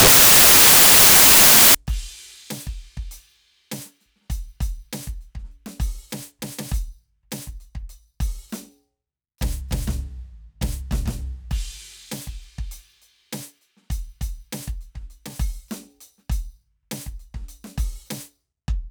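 Samples built from the wrong bytes open this music clip, running from the start to about 1.75 s. For that stretch the bytes of each sample are assembled in the wrong order or alignment, so the rapidly changing low-order bits land in the most significant positions. The music is swamped by loud, harsh broadband noise, before the audio snaps back to normal playback.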